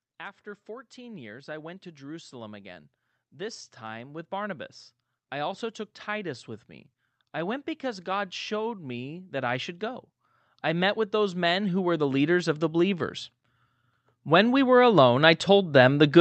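At 0.67 s the automatic gain rising kicks in: the gain control decides the input is too quiet and ramps up over about four seconds to 4.66 s, roughly 8 dB louder, with voice and room noise swelling together. It happens again just after "with me," from 7.33 to 10.09 s (about 5 dB), then 10.63 to 13.17 s (about 6 dB), and once more from 14.26 s to the end, all heard through a call-codec path whose top end stops around 8 kHz.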